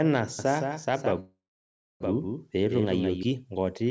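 From 0.39 s to 3.23 s a doubled audio track runs under the speech: a second, full-band copy trails the original by around 150 ms at roughly 5 dB lower. It has no reverberant tail or room colouring, and it switches on and off abruptly at those boundaries. The likely cause is the same signal being picked up again through a slower route, or an edit holding two unaligned copies.

From 1.20 s to 2.03 s a call audio freeze interrupts the stream. The last sound is stretched into a fading buzz or hiss that gives way to about 630 ms of silence, filling roughly 0.8 s in total. When playback resumes it continues where it stopped, with nothing lost but everything after it pushed about 0.8 s later. This is likely packets stalling in transit until the jitter buffer emptied. The call path's band limit is audible too, with nothing above 8 kHz, consistent with G.722 at around 64 kbps.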